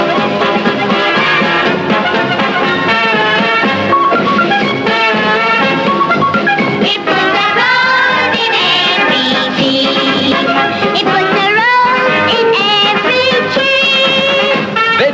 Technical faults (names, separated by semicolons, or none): none